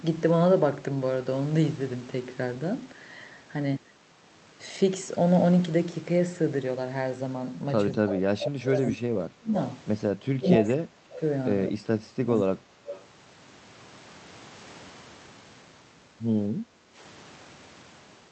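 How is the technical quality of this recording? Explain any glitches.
The recording has clear echo-control problems in its middle section and a brief background dropout near the end, heard through a call codec whose sound tops out around 8 kHz.

Speech suppressed in double talk occurs from 7.93 to 9.56 s, 10.35 to 11.21 s and 11.71 to 12.76 s. The speech sinks by about 25, 30 and 25 dB. It likely happens because the echo canceller misread overlapping talk as echo and turned it down. On a waveform the envelope pinches inward, and a spectrogram shows the speech energy fading.

The echo leak appears at 8.06 to 8.17 s and 12.86 to 13.04 s as scraps of speech trailing 209 ms behind the original. They sit about 10 and 15 dB below the speech. They likely come from a loudspeaker pickup that the canceller failed to remove. A spectrogram shows a weak copy of the speech pattern shifted right by that delay.

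Background gated by the echo canceller occurs from 16.63 to 16.95 s. The room tone drops by about 9 dB for roughly 0.3 s, then recovers, because the canceller clamped the microphone while the loudspeaker played. The noise floor visibly steps down and back up on both a waveform and a spectrogram.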